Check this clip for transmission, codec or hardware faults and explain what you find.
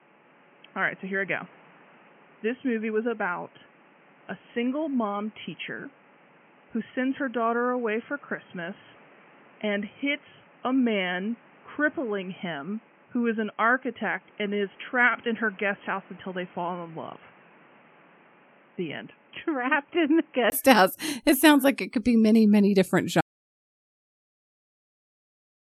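Two faults turn up in this speech clip.

From the start until 20.52 s the sound is dull and boxy, with nothing above 3.2 kHz, a level about 5 dB down and a noise floor only about 30 dB below the speech. That's likely an input switched to a poorer device. At 20.52 s it switches back, after a brief silence of about 20 ms, and the sound opens up again.

At 23.21 s there's an audio dropout to silence that runs right to the end. The input was likely lost and the recorder kept writing silence, so everything cuts out completely, with no room tone left.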